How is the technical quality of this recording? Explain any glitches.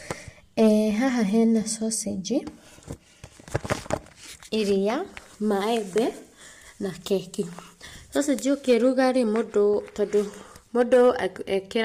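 The technical quality is compromised by constant codec damage and three short bursts of clipping.

Throughout the speech there is plainly audible roughness and graininess, with noise filling the gaps between harmonics and a thin, artificial top band. This is likely low-delay AAC compression (AAC-ELD). Its short frames resolve pitch harmonics poorly, and the degradation fits a bitrate of around 32 kbps.

Hard clipping occurs at 0.59–0.68 s, at 8.69–9.04 s just before "rĩ mũndũ tondũ", and at 10.81–11.10 s, with peaks driven about 2, 3 and 4 dB past the clipping limit. The waveform tops are cut flat there, adding high harmonics heard as a brief harsh crackle.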